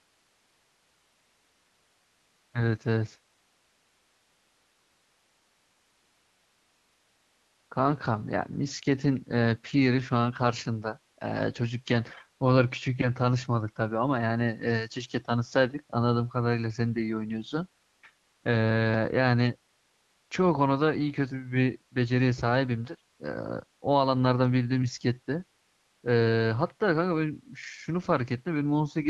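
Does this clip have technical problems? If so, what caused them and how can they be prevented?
Yes. AMR comfort noise replaces the real background at 0.0–2.53 s, 3.35–7.69 s, 11.13 s, 17.83–18.01 s, 18.15–18.43 s and 19.73–20.29 s. During those gaps the phone judged the talker silent and stopped sending speech frames, so the receiver filled in a smooth, even hiss built from a rough estimate of the background's level and spectrum. Unlike a noise gate, which drops to near silence, these pauses keep a steady synthetic hiss that switches abruptly against the genuine background around the speech. The speech itself comes through the wideband codec cleanly, which fits a 12.65 kbit/s mode. To prevent this, disable discontinuous transmission on the call, or record the audio before it reaches the phone network.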